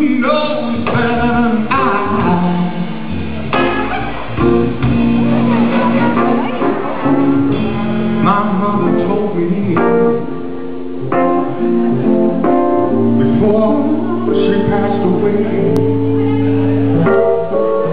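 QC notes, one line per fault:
15.49 to 16.04 s, CD scratch ticks: three short ticks, each under a millisecond, spaced about a quarter second apart. That regular spacing gives it away. A scratch on the disc wipes out more data than error correction can rebuild, once per revolution, and the player patches each hole by interpolating or muting a few samples. Each patch comes out as a tiny click, and you get a steady little tick train lasting about half a second.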